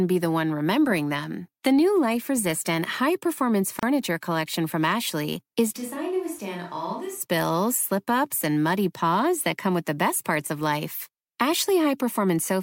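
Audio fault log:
3.79–3.83 s, gap at a join of encoded pieces: the speech breaks for a gap of about 35 ms, edges smeared, then resumes just before "collection from" exactly where it left off. Separately encoded pieces were joined untrimmed, leaving encoder start delay and last-frame padding in place.
5.78–7.19 s, switch to a distant microphone: just before "slip ups and muddy" the speech suddenly turns roomy and hollow, thinner in the bass, about 10 dB quieter, with background noise roughly 30 dB below it, then snaps back. Likely the close microphone dropped out and a farther one filled in.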